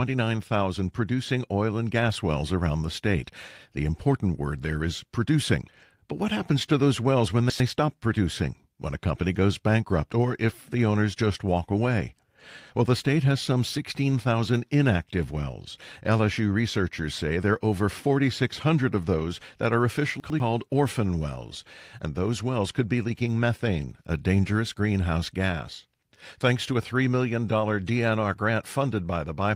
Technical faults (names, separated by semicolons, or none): chunks out of order; lost packet rebuilt from error correction